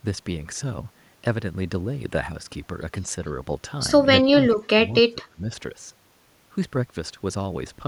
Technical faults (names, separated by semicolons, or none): speech suppressed in double talk